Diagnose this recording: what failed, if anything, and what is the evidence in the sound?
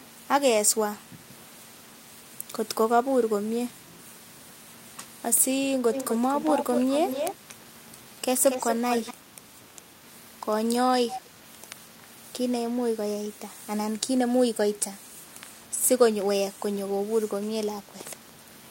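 Echo leak at the call-processing stage: a delayed copy of the speech follows it at a steady 235 ms, from 5.93 to 6.19 s, 6.4 to 7.54 s, 8.46 to 9.14 s and briefly at 11.1 to 11.21 s, sitting only about 5 to 10 dB below the speech. This is likely a far-end echo canceller letting loudspeaker pickup through. The fixed lag and distinct repeat in intermittent bursts set it apart from room reverberation, which smears into a continuous decay.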